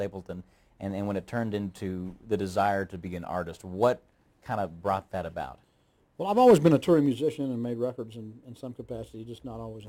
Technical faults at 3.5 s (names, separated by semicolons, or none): crude rate conversion